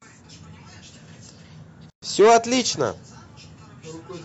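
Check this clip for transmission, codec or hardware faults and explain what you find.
One codec fault: from 1.90 to 2.02 s, a gap at a join of encoded pieces. Separately encoded segments were joined untrimmed, so encoder delay and end padding leave 122 ms of silence. Unlike a dropout, the speech resumes exactly where it stopped.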